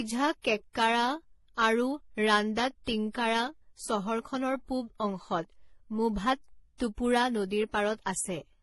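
From start to finish, this speech has a stacked, smeared quality, with nothing at all above about 11.5 kHz and two different kinds of codec grit sitting on top of each other. That's likely transcoding between lossy codecs. The sound points to a very low-rate HE-AAC pass, somewhere around 16 kbit/s, later re-encoded as MP3 around 48 kbit/s. The MP3 stage wastes bits reproducing the earlier damage while adding its own swirl, so neither set of artefacts goes away.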